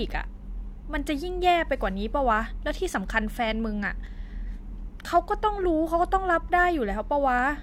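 No technical faults occur anywhere in the speech.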